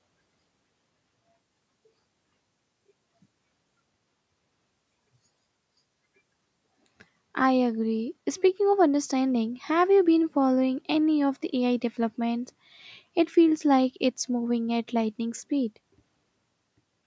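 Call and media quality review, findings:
No faults found in this speech signal; it carries the normal call microphone processing, with bass trimmed by the high-pass filter and no content above 8 kHz.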